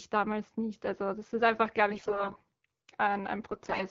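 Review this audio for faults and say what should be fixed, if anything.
AMR bit errors hit from 1.89 to 2.49 s, just after "das ist einfach glaube", and again from 3.51 to 3.84 s. Over a weak link, the lightly protected bits of the AMR wideband frames arrived corrupted while the checksum on the critical bits still passed, so the decoder trusted them. Excitation pulses land in the wrong places and the fine pitch, gain and spectral values drift. The speech keeps its rough pitch and level but turns hoarse, scratchy and gargly, worse in the second stretch, where roughly a fifth of the bits sound flipped. Preventing this means giving the radio link stronger channel coding or better signal margin, and letting the decoder treat badly damaged frames as lost and conceal them.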